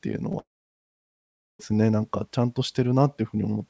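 Short concealed packet loss at 0.32 to 0.35 s opens the trouble in this speech clip: about 20 ms of audio failed to arrive in time, and the receiver patched the gap by extending the preceding sound for roughly a hundredth of a second before blending back, leaving a brief smear or wobble. A long network dropout follows from 0.39 to 1.61 s. The sound cuts out for about 1.2 s, and after a short fading continuation nearly all of that stretch, about 1.1 s, is silence. The audio then resumes with the lost portion simply gone, most likely because no packets reached the receiver for that whole span. Throughout, the audio has no content above 8 kHz, which fits a wideband G.722 call codec.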